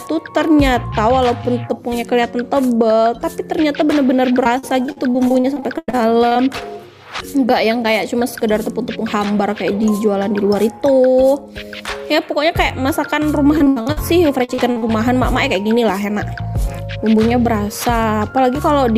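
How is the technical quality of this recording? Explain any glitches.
Choppy stretches break up the sound three times: 4.43 to 6.44 s, 13.58 to 13.98 s, and 14.44 to 14.98 s. This is repeated packet loss, giving a robotic sound. Pieces of audio kept going missing, and each hole was patched by extending the sound just before it. The gaps run up to 98 ms, so the result stutters. About half of the short burst at 13.6 s is filled-in sound.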